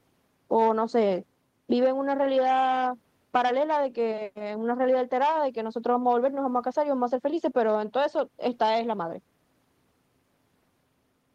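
No technical faults are audible anywhere in the recording.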